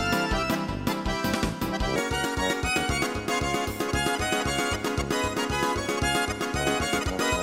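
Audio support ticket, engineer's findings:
Section at the wrong speed from 1.96 s to end: playback runs 1.43x fast, pitch up roughly seven semitones. Likely resampling or clock mismatch in the player or editor.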